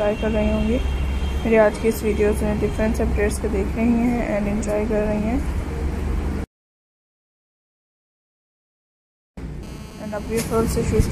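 The audio carries GSM phone buzz from 9.63 s to 11.07 s: a hard, raspy tone at about 217 Hz with a dense stack of harmonics, sitting about 25 dB below the signal and unrelated to it. A nearby 2G handset on a call is pulsing its transmitter 217 times per second, and the audio circuitry rectifies those radio bursts into this audible rasp. The buzz holds steady throughout that stretch.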